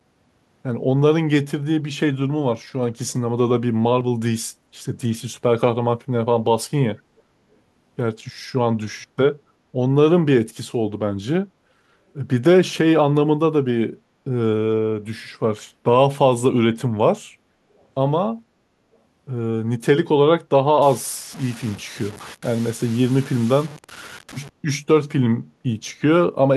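At 3.08 to 3.14 s and again at 7.17 to 7.22 s, a faint delayed copy of the speech surfaces, about 470 ms behind the original and roughly 35 and 40 dB down. This is echo leak, likely a loudspeaker echo canceller letting residue through. On a spectrogram it shows as weak, brief smears of the earlier harmonic pattern.

From 20.82 to 24.49 s the speech turns grainy, with distortion that rises and falls with the sound and a noise floor about 20 dB below the signal. This fits low bit depth without dither, likely a 6-bit signal truncated rather than dithered. The waveform shows coarse stair-steps, and the spectrogram shows broadband grit that tracks the speech.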